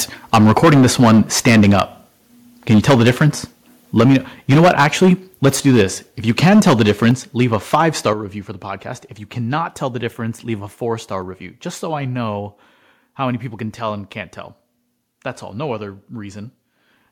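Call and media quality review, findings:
Microphone overload: harsh crackle on the loudest speech at 0.33–1.82, 2.69–3.28, 3.97–4.17, 4.50–5.13, 5.44–5.83, 6.29–7.12 and 7.40–7.81 s (before "star review for the"). Peaks are flattened at the converter, about 7–11 dB over, likely from excessive input gain.

Microphone volume stepped down: voice and background drop together in one step at 0.34, 4.01 and 7.11 s (about 3 dB each), 8.13 s (about 7 dB, before "review for the podcast") and 11.22 s (about 2 dB, after "leave a four star"). This is likely the call software's input-gain control reacting to clipping.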